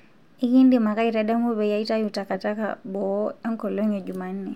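No technical faults are audible.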